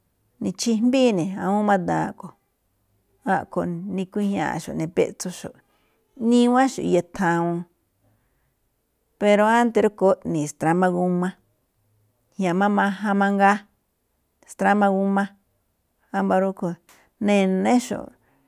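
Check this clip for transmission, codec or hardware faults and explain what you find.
I find no faults in this clip.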